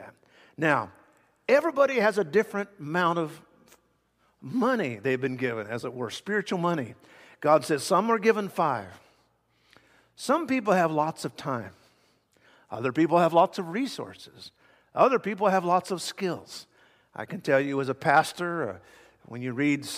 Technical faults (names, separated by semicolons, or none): periodic USB or driver dropouts